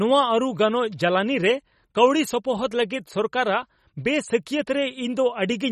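Throughout the speech, the treble stops dead at about 14.4 kHz and the upper band has a watery, swirling quality that is plainly audible. This is MP3 compression, likely at a starved setting, with the damage fitting a bitrate around 32 kbps. Short of bits, the encoder has discarded everything above that cut-off and zeroed weaker frequency lines, which drop in and out from frame to frame, so sibilants turn chirpy and metallic and consonant onsets smear.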